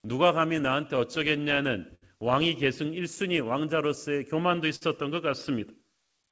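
Clock drift between sender and receiver runs through the whole speech clip. The sender's clock is running roughly five percent slow, so the receiver's jitter buffer keeps draining and must be topped up. Unlike a single glitch, the effect is a steady, one-directional timing pressure that never lets up.

Repeated timing corrections answer that drift from 0.06 s to 6.29 s. The receiver stretches short pieces, playing at 99% speed and adding around a tenth of a second overall. Each edit lengthens the audio rather than cutting it, and the edits are unevenly spaced. The result is a faintly dragging, unsteady tempo, not distinct holes.

Scattered short gaps fall between 0.17 s and 2.04 s and again between 3.16 s and 4.83 s, around seven in each stretch. The longest is about 70 ms in the first stretch and about 50 ms in the second. Each hole was patched by continuing the preceding sound, so these are heard as brief smears or ticks. 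That separates them from the smoother stretching. The band stops at 8 kHz, which fits a wideband call codec such as G.722.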